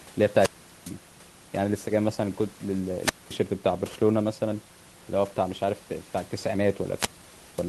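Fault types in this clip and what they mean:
Wireless microphone squelch dropout: the radio signal from the analogue FM microphone weakens until the receiver's squelch shuts the output. The speech breaks three times, near 0.35 s, 2.97 s and 6.95 s. Each break begins with a swell of hiss and static, then drops to near silence for about 0.41 s, 0.22 s and 0.53 s. That rising static before each hole sets it apart from a digital dropout, which cuts cleanly to silence.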